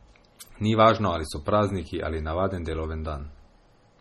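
Throughout the speech, the treble stops dead at 16.3 kHz and the sound has a heavy watery, swirling quality, with chirpy s sounds and smeared attacks. Those flickering artefacts, which a plain low-pass filter wouldn't produce, point to MP3 compression at a low bitrate, likely around 32 kbps.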